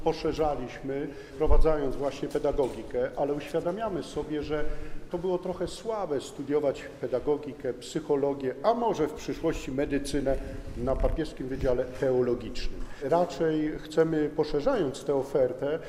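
Nothing here trips a single fault; the whole thing rolls along without a hitch worth flagging.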